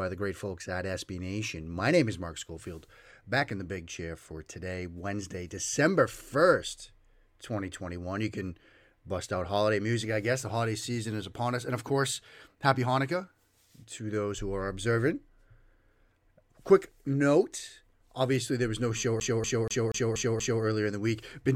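A CD stuck on one turn runs from 19.2 to 20.63 s, just after "there was no show". A scratch keeps sending the laser back one track at the same point on each rotation, so the same 0.24 s slice of speech plays six times in a row. Each jump leaves a brief mute, giving the rapid, evenly spaced stutter of a skipping disc before playback moves on.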